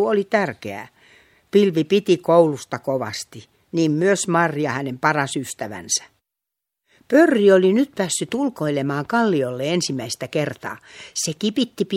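Speech recording, no audible technical faults anywhere in the clip.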